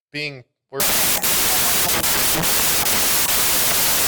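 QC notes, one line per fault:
0.8 s to 4.08 s, wrong sample width: audio written as 16-bit integers is read back as packed 24-bit samples, so each value straddles the byte boundaries of neighbouring originals and most come out as loud, harsh noise, with only some keeping the real signal's top bits. The buried speech runs 1.5 times too fast and pitched up, which separates this from a byte-order swap, where speed and pitch stay correct.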